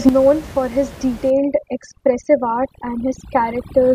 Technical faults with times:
1.30-3.95 overdone noise removal

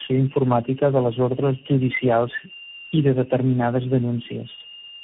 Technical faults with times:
0.00-5.03 switching supply whistle
0.00-5.03 tandem speech coding

